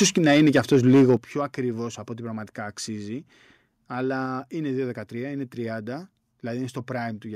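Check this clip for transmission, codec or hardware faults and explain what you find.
The clip has two related problems at the start.

From 0.01 to 1.14 s there is harsh, crackly distortion that sounds like microphone overload, likely from input gain set too high so peaks drive past the converter's limit by about 4 dB. Around one sample in twenty is flattened. On the waveform the peaks show squared-off tops, and the spectrogram shows broadband smearing above the speech harmonics.

Two sudden level drops follow, at 0.18 s by about 4 dB and at 1.17 s by about 10 dB, just before "πιο ακριβώς από". These fit the microphone volume being stepped down, likely by call software reacting to the clipping. The waveform envelope shrinks abruptly at each point, and the spectrogram dims evenly across all frequencies.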